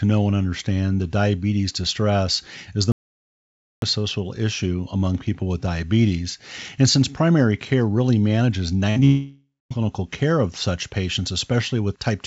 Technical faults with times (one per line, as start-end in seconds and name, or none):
2.92-3.82 audio dropout to silence
8.90-8.98 burst of packet loss
9.00-9.03 short concealed packet loss
9.05-9.72 long network dropout